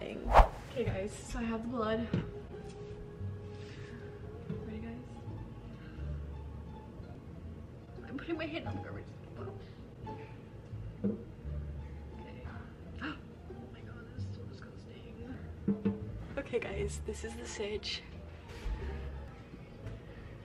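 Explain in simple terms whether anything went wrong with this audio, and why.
Two short glitches come from damaged data in a compressed stream. The first is a tiny blip at about 15.34 s, and the second is a longer glitch from 19.28 to 19.31 s. At those points, some of the stored data was corrupted, so the player misread it and had to find its place again.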